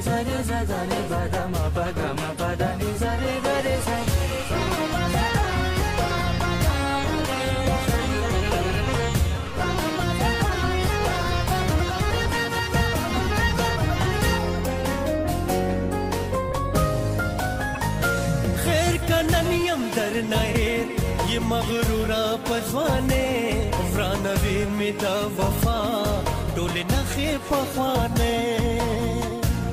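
Three damaged compressed frames reached the decoder and were played as if valid, a corrupt frame decoded fault, so flipped bits were read as wrong gains and codes that placed energy at the wrong frequencies. In this audio it is heard as a brief glitch from 2.37 to 2.40 s, about one frame long and peaking near -25 dBFS, then a louder glitch from 17.75 to 17.78 s spanning roughly two frames and peaking near -15 dBFS.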